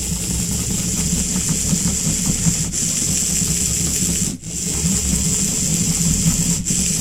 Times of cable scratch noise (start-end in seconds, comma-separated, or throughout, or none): none